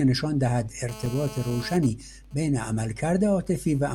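A speech clip with three faults. From 0.89 to 1.76 s there is GSM phone buzz. A nearby 2G phone in a call pulses 217 times a second, and the audio circuit rectifies those radio bursts. The result is a hard, raspy 217 Hz buzz rich in harmonics, about 16 dB below the speech. At 1.06 s comes a block of digital silence lasting 5 ms. The sound drops straight out and returns with no fade. At 5 ms it reads as a brief tick. The likely cause is an output buffer that was not filled in time. From 1.76 to 3.93 s the phone switches to GSM signalling bursts, which fit the talker on that call falling silent. Only short groups of bursts are sent, and each is rectified. This gives even ticks with a longer 217 Hz buzz twice a second, roughly 25 dB down.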